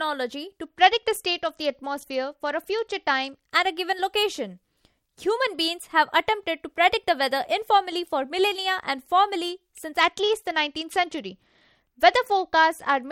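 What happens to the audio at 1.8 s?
From 0.63 to 3.52 s, a Bluetooth SBC bit pool drop starves the upper sub-bands of bits, so the speech dulls and turns gritty.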